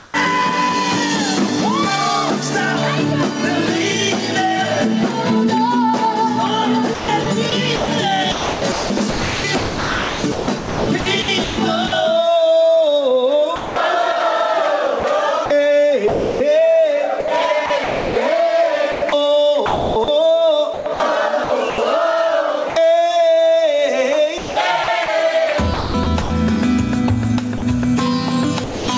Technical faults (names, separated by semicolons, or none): gain pumping; comfort noise in place of the background; sound chopped by the voice detector